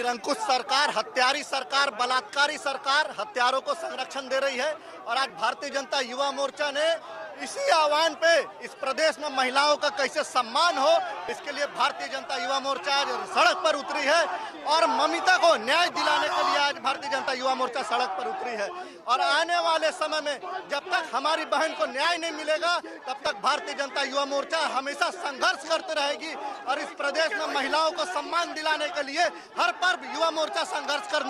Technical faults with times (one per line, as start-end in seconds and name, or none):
5.30 audio missing between chunks
11.29 audio missing between chunks
17.28 audio missing between chunks
23.26 audio missing between chunks
29.25 audio missing between chunks